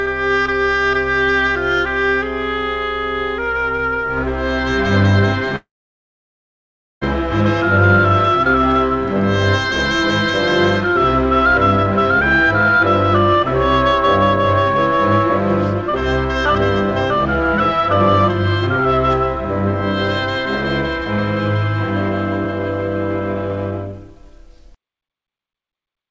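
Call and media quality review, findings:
Call audio freeze, 5.56–7.04 s: sound stops, a brief decaying continuation of the last sound, then about 1.35 s of silence, resuming exactly where it left off with nothing lost. Likely delayed packets draining the jitter buffer; the 1.46 s stall becomes added latency rather than missing audio. Band-limited to 8 kHz throughout, consistent with a G.722 path.

Jitter buffer speed-up, 22.45 s to end: audio runs about 8% fast at unchanged pitch, hurried. The receiver is trimming a backlog by repeatedly cutting pitch-period-sized slices, roughly a third of a second in total, to pull buffered delay back toward target.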